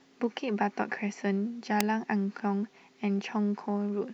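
At 1.81 s a single sharp snap cuts across the speech, peaking loud, around -10 dBFS, and lasting only a couple of milliseconds. This is an electrical switching spike, likely from a nearby switch or discharge arcing and being picked up on the audio line. It sits on top of the speech rather than interrupting it. A buffer dropout would leave a gap or jump in the sound itself, and a mouth click is softer and shaped by the voice.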